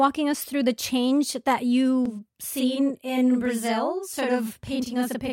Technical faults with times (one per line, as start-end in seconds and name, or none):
2.05-5.32 channel delay (doubling)